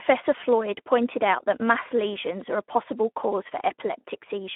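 The speech carries Speex codec damage throughout. Too few bits for the excitation leave it hoarse and noisy, confined to a 200 Hz to 3.4 kHz band.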